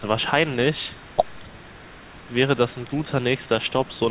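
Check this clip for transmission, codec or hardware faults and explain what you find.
One fault runs through this speech clip: echo leak, faint. The far end's echo canceller was likely leaving some of its loudspeaker output in its microphone feed and sending it back. That residue appears as a delayed copy trailing the speech by 225 ms, very quiet at about 30 dB below the speech from 0.95 to 2.32 s, then as brief scraps about 35 dB down at 2.72–2.87 s, 3.38–3.48 s and 3.66–3.99 s. It is heard as a ghostly doubling within the call's narrowband 4 kHz range.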